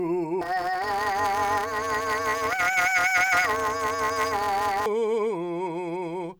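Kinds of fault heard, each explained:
Planar audio read as interleaved: from 0.41 to 4.86 s the music turns into a robotic buzz at about 188 Hz, with no clear octave shift. Each 5.33 ms block holds all of one channel then the other, but is read as alternating pairs, so left and right play in turn at double speed.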